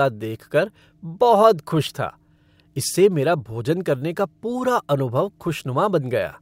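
Nothing goes wrong anywhere in this bit of speech, so there's no technical fault to point to at any moment.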